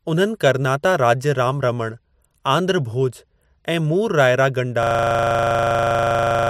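At 4.83 s the speech freezes into a system hang loop that runs to the end: the machine stalled while the audio hardware kept replaying one 40 ms slice of its buffer, dozens of times over, giving a rough, rattling buzz at about 25 Hz.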